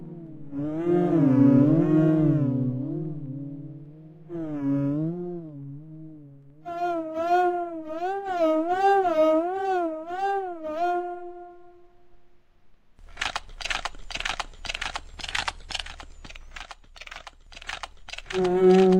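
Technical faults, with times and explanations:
No technical faults detected in this recording of sounds.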